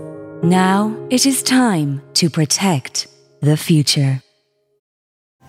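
No technical faults can be heard anywhere here.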